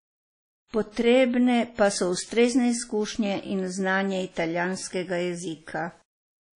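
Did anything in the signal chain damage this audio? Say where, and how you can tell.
Yes. At the codec stage, a low-bitrate encode, likely WMA near 32 kbps, removes everything above 10.1 kHz and leaves washy, ringing hiss throughout the speech.

Pre-echo from the codec's transform blocks spreads noise ahead of an attack: a 57 ms hiss from 0.68 to 0.73 s smears that onset.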